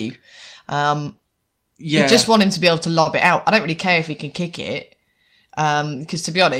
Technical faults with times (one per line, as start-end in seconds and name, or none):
3.01-3.08 short stall from a late packet